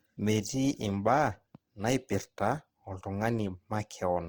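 The speech in this clip carries plainly audible Opus compression from start to finish, likely from encoding at a low bitrate that fits roughly 16 kbps in the codec's music (CELT) mode. Tonal parts turn rough and grainy where thin bands were filled with folded or noise-like energy. Bandwidth stays full, extending to 20.4 kHz, and a spectrogram would show upper bands evenly textured with speckled noise rather than holes, with smeared harmonics.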